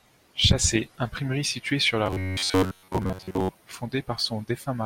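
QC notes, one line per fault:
2.06–3.49 s, robotic sound from repeated short buffers: new audio likely arrived too seldom, so playback kept looping a slice of about 10.7 ms while most real audio was skipped, stamping a rigid, metallic 93.8 Hz buzz onto the speech that only loosely follows it.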